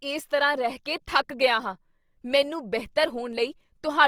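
Across the whole recording the speech has a rough, grainy texture: voiced sounds turn noisy and lose their smoothness. The top end stays open, reaching up to about 20.2 kHz, so nothing sounds muffled. That combination is likely Opus compression in its CELT music mode, running at a low rate, which fits roughly 24 kbps. The encoder keeps each band's energy but fills in detail with noise and folded lower bands.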